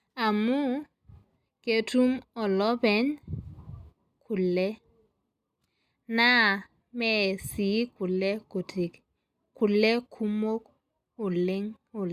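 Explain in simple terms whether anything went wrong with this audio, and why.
Nothing went wrong: the speech recording shows no audible technical fault at any point.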